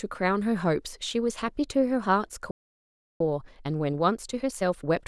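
A playback stall cuts the speech off mid-flow at 2.51 s, and the output stays silent until 3.21 s, a gap of about 0.69 s. The sudden break in the stream sounds like the player ran dry rather than like a pause by the speaker. The likely cause is that the playback buffer emptied or the audio thread was held up, so no samples reached the output until it recovered.

Time-compressed catch-up follows from 3.21 s to the end of the clip. The speech resumes hurried, running at about 1.15 times normal speed, yet its pitch stays where it was. To work off the backlog built up during the stall, the player is dropping small slices of audio and cross-fading across the joins.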